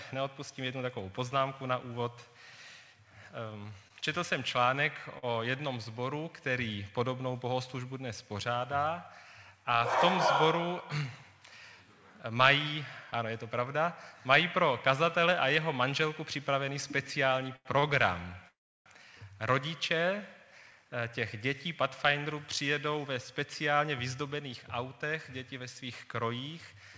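At 3.88 to 3.92 s, 5.18 to 5.25 s, 17.56 to 17.67 s and 17.79 to 17.85 s there are short stalls from a late packet. Each time, the next packet had not arrived when the jitter buffer needed it, so the receiver extended the last sound for 23, 44, 91 and 35 ms respectively, then resumed from the same point. Nothing is lost, but the sound is briefly held with a slight buzz or dip.

From 18.49 to 18.88 s comes a call audio freeze. The sound hangs and decays, then drops to silence for about 320 ms of the 371 ms hold before picking up exactly where it stopped. The likely cause is packets held up in transit that emptied the jitter buffer, adding a gap rather than removing audio.

From 20.56 s to 26.76 s there is a jitter buffer speed-up. After the delays piled up, the receiver trimmed the excess by cutting out many pitch-period-length pieces in a row, about a third of a second in total. Playback runs at 104% with pitch unchanged. 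The whole clip has nothing above 8 kHz, which fits the G.722 wideband call path it passed through.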